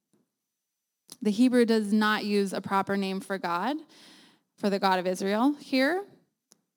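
From start to end the speech carries sample clock jitter: the converter's timing wanders by around 4 microseconds rms, so each sample lands slightly off its proper instant. The resulting error sits roughly 30 dB below the signal and tracks how steeply the waveform is changing. It is heard as a gritty hiss riding on loud and bright sounds. Unlike a steady noise floor, it disappears in the pauses between phrases.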